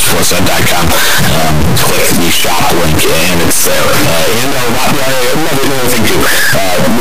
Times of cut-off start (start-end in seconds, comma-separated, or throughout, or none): none